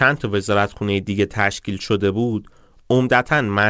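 No technical faults are audible.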